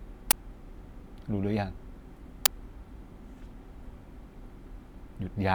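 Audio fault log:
0.31–0.33 s and 2.46 s, uninitialised buffer: a playback buffer went out before any audio was written to it, so leftover memory played as sound. The result is loud bursts of digital noise, 23 ms long (fitting a 1024-sample buffer) and 6 ms long (fitting a 256-sample buffer). On a waveform they appear as abrupt blocks with hard edges. On a spectrogram they are bright broadband vertical stripes.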